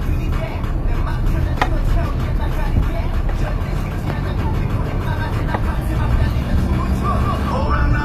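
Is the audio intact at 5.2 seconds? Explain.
No. At 5.2 s, as throughout, the treble sounds gritty and metallic, likely from HE-AAC compression (consistent with about 24 kbps) rebuilding highs from copied lower bands; a spectrogram shows repeated band patterns and nothing above 14.9 kHz.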